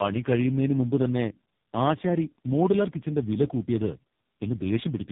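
Throughout, the speech shows tandem speech coding: it has been decoded and re-encoded by three separate speech codecs in turn, the last sounding like AMR-NB, each compounding the previous one's damage. The result is rough, muffled, warbly speech with nothing above 3.8 kHz.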